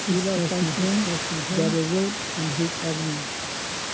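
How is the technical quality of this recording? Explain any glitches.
The recording has one clear glitch: a doubled audio track from the start of the clip to 1.78 s. The sound arrives twice, with a second full-band copy trailing roughly 0.7 s behind and a few dB quieter. That is likely a second capture through a slower path being mixed back in. The copy has no reverberant tail or room colouring and cuts off abruptly at 1.78 s. On a spectrogram the speech patterns repeat, shifted right by that fixed gap. The waveform shows overlapping, echo-like bursts that end sharply.

The call microphone's high-pass filtering and its top end at 8 kHz are as expected, and the room noise sits about 9 dB below the speech.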